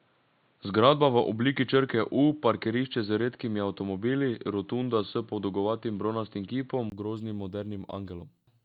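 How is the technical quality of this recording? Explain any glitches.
The recording has one clear fault, affecting most of the speech. Input switched to a poorer device, 0.0 to 6.92 s: audio likely came through a narrower-band microphone or headset, cutting everything above 4.4 kHz, so it sounds dull and boxy over faint added noise. At 6.92 s, a 20 ms silence precedes fuller sound and a level shift of roughly 5 dB.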